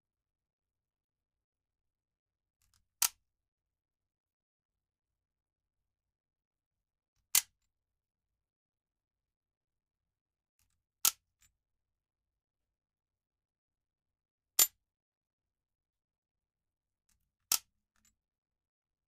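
Everyday sound throughout, and the whole 19 seconds carries a channel delay with comb filtering. One side is running roughly 20 ms behind the other, and once the two are folded to mono, whatever they share cancels at evenly spaced frequencies. With the first notch down somewhere near 20 Hz, the notches sit close together and stay put, so everything comes across rough and slightly doubled from start to finish.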